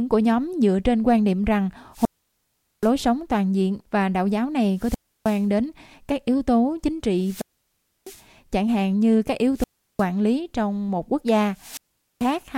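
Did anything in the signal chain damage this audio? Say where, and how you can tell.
Yes, the wireless link: five wireless microphone squelch dropouts at 1.93, 4.75, 7.20, 9.55 and 11.53 s. Each is a hiss swell, then near silence while the receiver's squelch mutes the faded signal.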